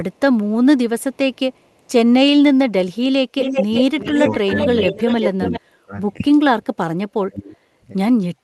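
From 1.15 to 1.9 s, a very faint echo leak trails the speech by 430 ms. From 3.41 to 5.6 s, a stronger one at 382 ms sits nearly as loud as the speech. Both likely come from a far-end loudspeaker whose echo canceller let its pickup through. Speech is also suppressed in double talk at 3.67–4.49 s (dips up to about 20 dB), 4.91–5.06 s (slight), 5.38–5.94 s (about 30 dB) and 7.25–7.78 s (about 25 dB). This is likely the canceller ducking overlapping talk.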